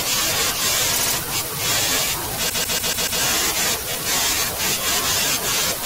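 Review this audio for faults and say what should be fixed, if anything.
Repeated frames stutter the speech at 0.93–1.14 s and 2.49–3.21 s. Blocks of 72 ms and 144 ms replay, adding 0.22 s and 0.72 s. Make the writer or sender emit each compressed frame once.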